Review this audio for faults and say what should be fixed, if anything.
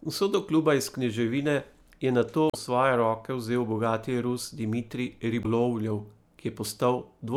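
Damaged data in a compressed stream: corrupted bytes made the decoder misread frames and lose sync, producing brief disruptions at 2.47–2.55 s (after "iz kneževine je nato", before "svoje roke vzel bogati") and at 5.41–5.46 s. Verify transfers with checksums and re-fetch corrupted files.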